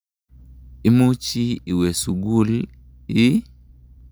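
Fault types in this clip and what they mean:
No technical faults can be heard in this speech recording. There is nothing to list for it.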